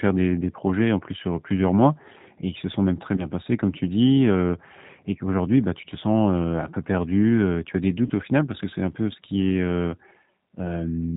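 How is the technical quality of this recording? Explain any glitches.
The technical quality is limited by low-rate speech coding, and there are two brief dropouts.

Throughout, the speech carries G.729 codec damage. The sound points to 8 kbit/s G.729A coding. It rebuilds the voice from a vocal tract model and a few pulses per frame, and it passes nothing above 4 kHz. The result is plainly rough, synthetic and band-limited.

There are two packet-loss glitches, concealed by the speech codec. They fall at 3.17 to 3.27 s and at 8.07 to 8.12 s, covering about 10 ms and 30 ms of lost audio. The decoder filled each gap by extending its last pitch and filter at falling gain. You hear a short buzzy or noisy smear, then weakened speech while it recovers.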